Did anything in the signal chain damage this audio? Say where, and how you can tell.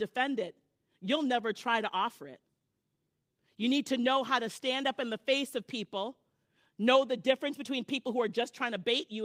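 No, nothing in the signal chain damaged this speech.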